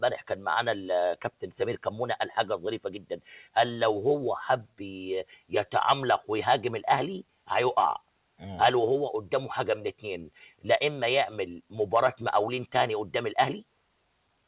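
From 3.02 to 3.28 s the sound was cut by the noise suppressor: it took part of the sound for noise and turned it down, by about 12 dB at the deepest point, for roughly 0.3 s in all. The waveform's envelope narrows there, and on a spectrogram the affected sound dims for that stretch, all of it lying beneath the flat 4 kHz ceiling left by the G.711 call path.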